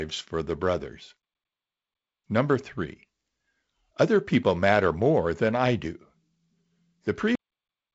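The final buffers were never written, so at 7.35 s the speech is cut off mid-sound, dropping straight to digital silence with no natural decay: a cut-off end.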